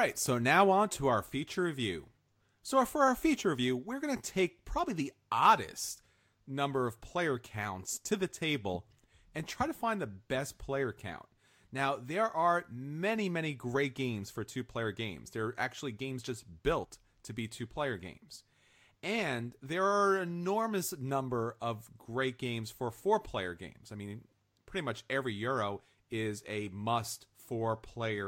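At 3.36 s and again from 16.83 to 16.85 s, compressed frames get skipped, sounding like a couple of frames each time. The audio jumps ahead by a few milliseconds, then by roughly 50 ms.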